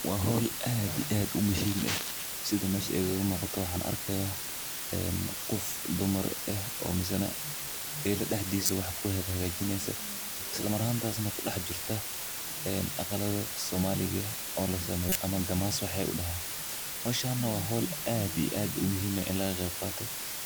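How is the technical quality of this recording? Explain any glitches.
The recording has poor technical quality, with heavy hiss throughout and two short decoding glitches in the speech.

Low bit depth with dither: the audio is reduced to 4 bits with dither added, turning the rounding error into a steady, even hiss nearly as loud as the speech.

Corrupt frame decoded: at 8.66–8.73 s, just after "eey la", and 15.09–15.17 s, just after "oo la", damaged data was decoded anyway. Each produces a brief burst of misplaced energy, peaking around -10 and -15 dBFS. Both fit a couple of corrupted frames.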